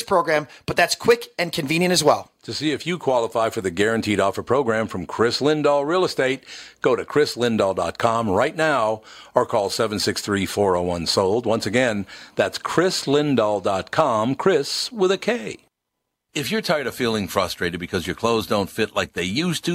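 No technical faults can be heard anywhere in the recording.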